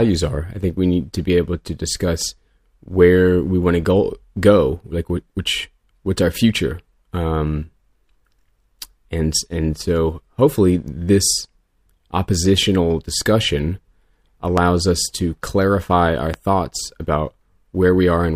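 At 14.58 to 14.60 s a loud pop cuts across the speech, standing well above it, and a second, weaker one follows at 16.34 to 16.36 s. Each is a single sharp thump about 20 ms long, likely from a voltage pulse such as static or a switching glitch entering the signal. Unlike a dropout click, the speech carries on unbroken beneath both pops, with no gap or skip in the sound.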